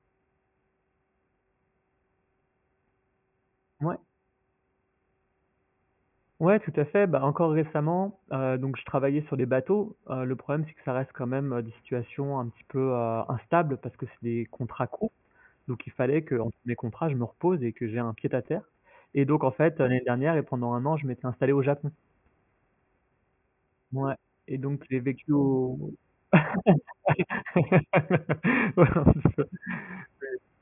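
Speech recording with no audible technical faults anywhere.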